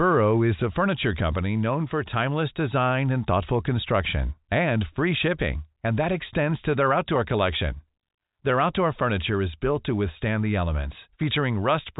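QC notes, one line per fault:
No faults were found in the speech. It carries the G.711 telephone coding, with nothing above about 3.8 kHz, as that path gives.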